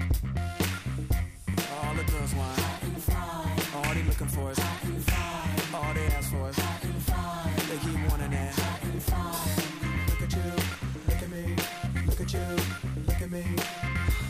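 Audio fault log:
Nothing to flag here; no problems turn up anywhere in the audio.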